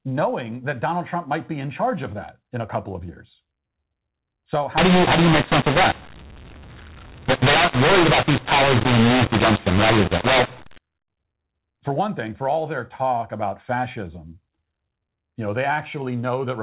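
Harsh, gritty distortion takes over this speech recording from 4.78 s to 10.78 s. Loud and soft passages come out at scrambled levels, and the pauses fill with a hiss. The cause is mu-law and A-law mixed up: audio encoded with A-law companding is decoded with the mu-law curve, so every 8-bit code maps to the wrong amplitude. The faint low-level codes are lifted well above silence. The telephone band stops at 4 kHz throughout, which fits G.711 coding at 8,000 samples a second.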